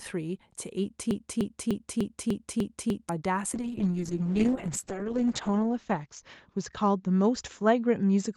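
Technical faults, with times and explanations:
1.11 to 3.09 s, broken-record loop: a chunk of about 0.30 s plays back to back 7 times, exactly the same each pass, and whatever should have come next is simply gone. Most likely something in the chain stalled and kept resending its last buffered fragment.
3.54 s to the end, call bitrate drop: the speech goes rough and watery, and the top end narrows from about 12 kHz to 8 kHz, which fits the Opus encoder being pushed from 48 kbps down to 6 kbps. It sits at its worst for about 1.46 s.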